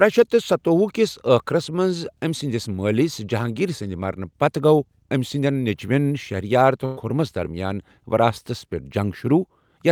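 Speech, with a burst of packet loss from 6.85 to 6.99 s. Several packets failed to arrive in time. The receiver stretched the last sound for about 115 ms, fading it as a buzz or hiss. Then speech resumes with about 120 ms missing.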